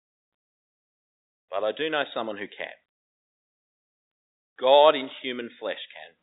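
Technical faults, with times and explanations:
No technical faults are audible anywhere in this recording.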